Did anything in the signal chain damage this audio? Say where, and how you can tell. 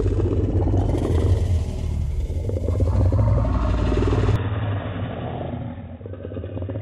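Yes. From 4.36 s to the end, the sound turns dull and boxy, with nothing above 3.8 kHz, a drop of roughly 5 dB and a new noise floor some 35 dB down, with no gap. The likely cause is the input switched to a poorer device at capture.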